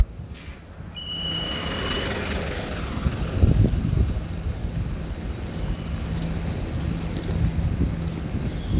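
A recording of everyday sounds, with no technical fault to be heard anywhere in it. Nothing in the audio calls for a time or a cause.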